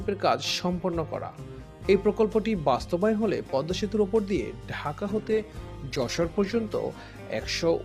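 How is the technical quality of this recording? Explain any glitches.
One fault degrades the recording near the end. From 5.07 s to the end, a call bitrate drop sets in. The encoder is starved of bits, which fits a fall from around 128 kbps to 16 kbps. Coding turns coarse and highs are cut. The sound goes rough and muffled, bottoming out for about 1.65 s.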